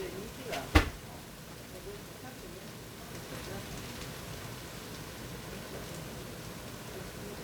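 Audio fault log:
Throughout: 1-bit DFPWM compression. Every sample is squeezed down to a single up-or-down step, so an adaptive level is always chasing the real waveform and never quite landing on it. That leaves a thick, broadband fuzz of quantisation noise sitting over everything, with constant crackle, and the top end is dulled or buried under hiss. The damage is heavy, and the grain of it fits a stream of around 48 kbps.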